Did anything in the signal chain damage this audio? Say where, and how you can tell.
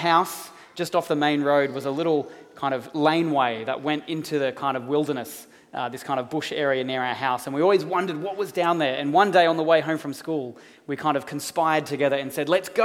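No, nothing in the signal chain stood out as damaging this audio on listening.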